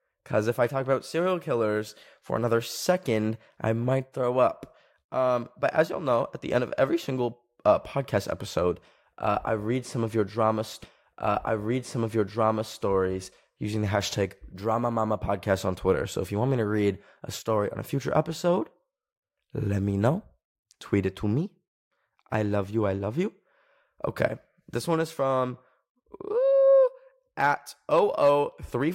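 At 10.83 s the speech jumps back and replays, a stream segment repeated: the player handled the same two-second segment twice, so 10.83 to 12.83 s is heard again and the clip runs 2 s longer than it should. A small blip marks the jump back. On a spectrogram, two identical two-second blocks of harmonics and formant bands sit side by side. The waveform shows the same envelope pattern twice, with a sharp discontinuity at the seam.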